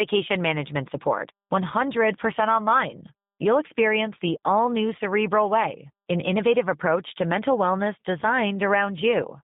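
G.729 codec damage runs from start to finish. The speech has been rebuilt by a low-rate predictive coder, one that fits the 8 kbit/s G.729A variant. Each 10 ms frame is reduced to a vocal tract filter, a pitch estimate and a few sparse pulses, so the sound is plainly rough and synthetic. The line band runs only from about 150 Hz to 3.7 kHz, leaving it thin and muffled.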